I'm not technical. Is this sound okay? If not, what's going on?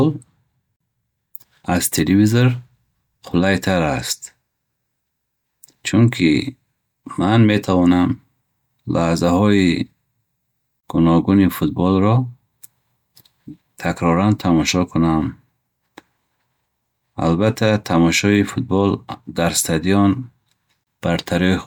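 No. There are three tiny dropouts in the speech, and each is a gap at a join of encoded pieces. They fall at 0.76 s, about 43 milliseconds long, at 10.80 s just before "гуногуни футболро", and at 20.84 s just after "дар стадион", each about 32 milliseconds. They come every 10 seconds. The recording was likely saved in separate pieces and joined without trimming, so each join keeps a short stretch of silence. The speech then carries on from where it stopped.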